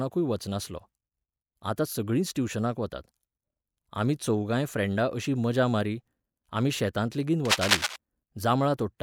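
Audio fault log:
7.45–7.96 s, cable scratch noise: right after "मारी आमी शेतांत लेगीत", about half a second of dense, ragged crackle rides over the speech at roughly the same loudness as the talker, so it really pokes through. It sounds like scratchy rustling rather than a clean click, which is the signature of a contact whose resistance is jumping around. The likely culprit is a worn cable or connector getting nudged mid-take.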